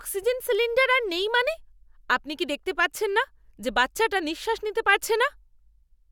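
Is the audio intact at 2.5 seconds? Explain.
Yes, at 2.5 seconds the speech plays through intact, with no audible fault at that moment.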